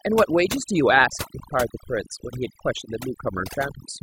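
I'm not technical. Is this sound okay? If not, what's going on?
No. Throughout this speech clip, a noise reduction tool was pushed far too hard, which is called overdone noise removal. The tool shuts off any slice of the sound it mistakes for background hiss, and it also catches the softer parts of the voice. So the gaps between sounds fall to an unnatural near-silence with twinkling, warbling specks.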